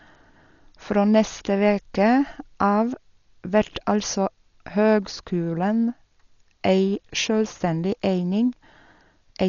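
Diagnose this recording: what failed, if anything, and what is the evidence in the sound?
The codec stage failed: the speech was most likely squeezed through Dolby Digital compression at a very low rate, consistent with about 40 kbps. The band stops near 7 kHz throughout, leaving it dull, and starved frequency lines filled with dither give a rough, fluttering hiss around tones.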